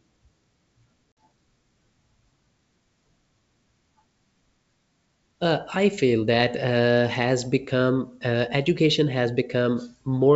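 At 1.15 to 1.17 s the speech drops into a hard-edged silent gap from packet loss on the ADPCM call, with 50 ms of audio missing, which points to a handful of packets. The decoder's predictor and step size then lag the sender's, so the G.722 wideband speech resumes with brief distortion.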